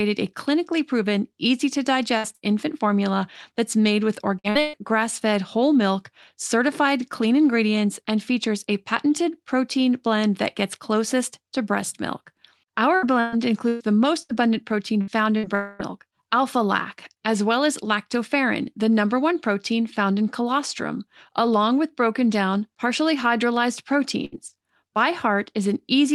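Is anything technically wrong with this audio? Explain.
Yes. This speech has several network faults, heard through a call path whose Opus-style coding tops out near 12 kHz.

Burst of packet loss, at 2.17–2.26 s, 2.35–2.44 s and 24.25–24.35 s: each time a run of packets worth about 60 ms went missing. The receiver stretched the last bit of sound across the hole and faded it, so each gap comes out as a short held buzz or softening hiss before the speech picks up a little further on, with that slice gone.

Repeated packet loss (robotic sound), from 4.39 to 4.76 s and from 12.96 to 15.46 s: packets dropped again and again, three times in the first stretch and six in the second, with the longest hole about 120 ms. Each patch is a continuation of the previous sound, and the next loss arrives before things settle. In the short stretch concealment covers about 60% of the time, so it sounds choppy. 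The longer stretch is patched about a fifth of the time and sounds more intermittently broken.

Long network dropout, 15.55 to 15.82 s: right after the robotic stretch, about 240 ms of audio never arrives, most likely because the connection stalled. The gap is filled entirely by a stretched, fading buzz or hiss with no stretch of pure silence. The speech then resumes further along, missing that quarter second.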